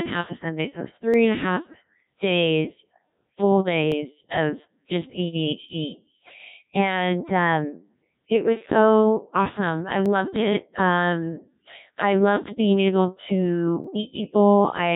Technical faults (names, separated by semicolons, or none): Codec 2 vocoder; dropped samples; bit errors on digital voice radio